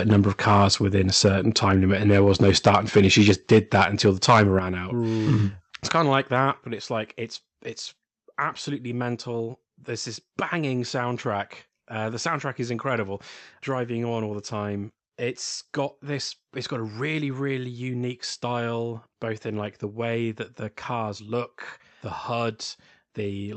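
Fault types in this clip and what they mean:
microphone overload: at 0.48–0.66 s, just before "within a", and again from 2.11 to 4.42 s, the loudest peaks are flattened and crackle harshly. They run about 3 dB and then about 9 dB past the converter's limit, with a few percent of samples squared off, likely from input gain set too high for the converter.
microphone volume stepped down: at 3.31 s, at 4.59 s before "out mm it's kind", and at 6.63 s between "kind of like that" and "but it's like it's", voice and background drop together by about 3, 7 and 5 dB. These are likely the call software cutting input gain after the clipping.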